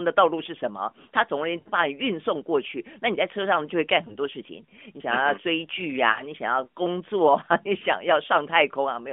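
Radio errors corrupted speech frames, and the AMR narrowband decoder concealed these lost AMR speech frames by repeating its last good pitch and vocal tract settings at falling gain. From 1.60 to 1.68 s a gap that fits three 20 ms frames smears into a drawn-out, fading tone. At 4.08 to 4.16 s a single lost frame causes a brief warbling dip. From 6.12 to 6.23 s another three-frame run stretches and fades, and the speech returns rough for a moment.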